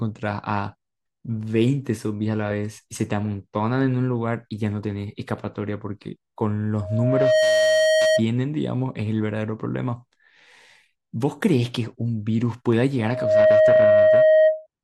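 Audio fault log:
6.80–8.23 s and 12.98–14.67 s, loudspeaker feedback squeal: a steady 628 Hz tone swells over the speech, climbing within about 0.4 to 0.7 seconds. The second event is louder, roughly 10 dB above the speech. The microphone is picking up its own loudspeaker, and at this frequency the loop gain exceeds unity.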